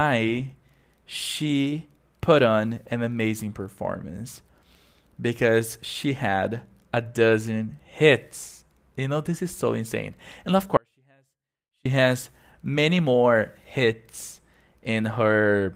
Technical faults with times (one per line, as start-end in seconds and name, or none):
10.77-11.85 audio dropout to a faint residue